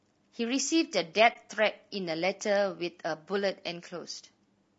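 Low-delay AAC compression runs through the whole speech clip, most likely AAC-ELD at a rate around 32 kbps. At this low rate, noise fills the gaps between the voice's harmonics, leaving the voice plainly rough and grainy, with a thin, artificial-sounding top band.

AAC frame loss with muting appears from 1.33 to 1.36 s. The decoder zeroed the spectrum for the missing audio, which points to a single lost frame of about 20 ms. The overlapping windows taper the sound down and back up, leaving a brief soft-edged dropout.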